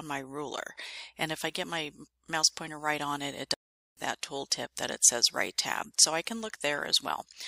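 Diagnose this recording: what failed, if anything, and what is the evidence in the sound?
Playback stall, at the playback stage. The sound stops dead at 3.54 s and stays silent until 3.97 s, a gap of about 428 ms. It then carries on. The likely cause is the player running out of buffered data, or its output thread being blocked. The device was left with nothing to send until it caught up.

Pre-echo, at the codec stage. Three sharp attacks are each preceded by a brief hiss. These come at 4.21 s, 4.50 s and 6.26 s. The hiss lasts 16 ms, 12 ms and 13 ms. It sits about 13, 15 and 12 dB above the quiet floor before each attack. The codec spread quantisation noise across a block of about 26 ms. So noise sized for the loud onset also filled the quiet moment before it. The attacks sound softened. Short blocks were never switched in to contain this.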